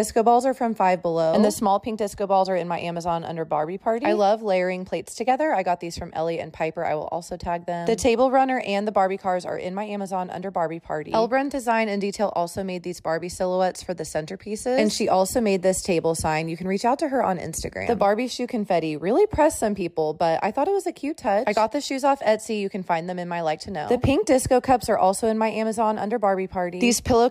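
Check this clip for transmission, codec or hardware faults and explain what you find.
Nothing stood out as a fault on listening to this clip.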